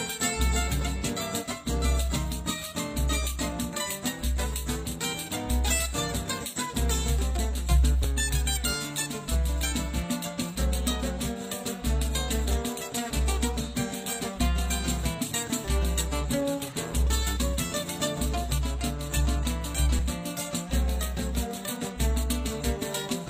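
At 8.04–8.08 s, 14.04–14.08 s, 18.00–18.03 s and 19.99–20.01 s, overlap between stream segments on the 2-second segment grid discards 20–32 ms of audio, producing brief clicks or skips.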